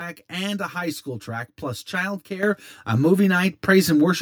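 From the start, the speech carries channel delay (comb filtering): one channel runs around 10 ms behind the other, and summing them to mono cancels shared energy at evenly spaced frequencies, the first near 50 Hz. It sounds hollow and phasey. A spectrogram shows fixed horizontal notch stripes roughly 100 Hz apart.

At 2.43 s, a microphone volume stepped up event lifts the input gain by about 8 dB in one jump, raising voice and background together. The waveform envelope widens abruptly at that point, and the spectrogram brightens across all frequencies in a sharp vertical edge.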